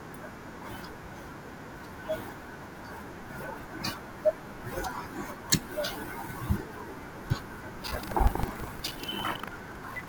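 From 7.8 s to the end the speech picks up buffer tearing: a rattly 25 Hz buzz as a small slice of each period replays audio from roughly 150 ms earlier.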